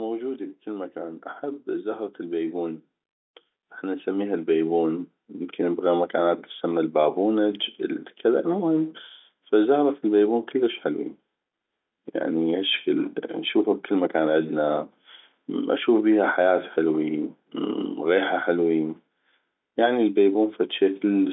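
The automatic gain control judged the input too quiet and raised its gain step by step, so the speech and the background swell together. It climbs about 3 dB from 2.17 to 2.89 s, after "بكل مكان احب زهرة", then about 5 dB from 3.82 to 5.91 s, just before "مكان تتسمى البابونج ال".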